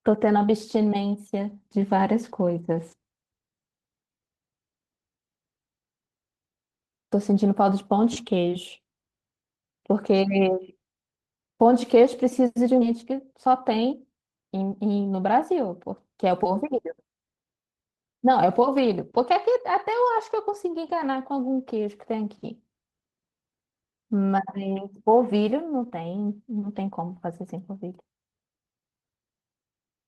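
A skip ahead occurs at 12.81 s. A stretch of audio was dropped so playback could leap forward, and the join is made with no gap filling at all. Roughly a third of a second of speech is simply missing. The material on either side is butted together almost directly, so the sentence lurches abruptly, as if a piece had been snipped out, and the listener hears a sudden discontinuity rather than a pause.

Jitter buffer speed-up follows from 12.90 to 15.02 s, while the receiver was still holding more buffered audio than it wanted. To shrink that backlog it repeatedly cut out short slices of a pitch period or so, compressing the stretch to run at 108% speed while leaving the pitch unchanged. Around a fifth of a second is shaved off in total, and across these two seconds the speech sounds noticeably rushed.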